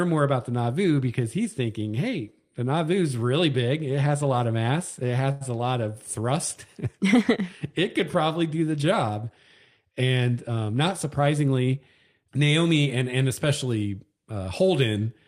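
Speech, with two timing faults. A short stall from a late packet at 5.31 to 5.43 s holds the sound for 93 ms until the packet arrives, with nothing lost, and playback runs 93 ms later from there. Jitter buffer speed-up from 10.58 to 11.75 s trims pitch-period pieces, about a tenth of a second in total, so the speech plays at 108% speed at unchanged pitch.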